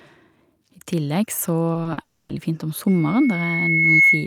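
Right around 1.73 s the speech starts to smear: three short concealed packet losses land close together, at 1.73 to 1.77 s, 1.83 to 1.87 s and 1.93 to 1.99 s. The first two are 20 ms holes and the third is 40 ms. Each time the decoder was missing audio and papered over it by extending what it had just played, so you get little wobbles and smears where the real signal should be.

Straight after that, from 2.01 to 2.31 s, the audio turns into a drawn-out synthetic buzz or hiss rather than speech. That's likely a long network dropout. Nothing came through for roughly 280 ms, and the receiver kept stretching the last bit of sound across the entire gap instead of letting it go silent. When the real audio resumes, whatever was said in that stretch simply isn't there.

Then at 2.87 s a thin tone at 2.2 kHz creeps in and keeps climbing for roughly a second until it's sitting about 10 dB above the speech. 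It carries on right to the end of the clip. That's classic loudspeaker feedback squeal. The mic is hearing its own loudspeaker, and at 2.2 kHz the loop gain tipped past one. That frequency just fed on itself and swelled, and nobody broke the loop before the clip finished.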